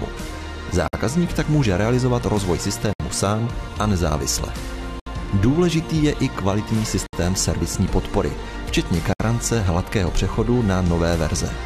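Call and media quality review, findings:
Gap at a join of encoded pieces: 0.88, 2.93, 5.00, 7.06, 9.13 s. Silences of 52 ms, then 67 ms, between 2 s segments encoded separately; encoder delay and end padding were never trimmed.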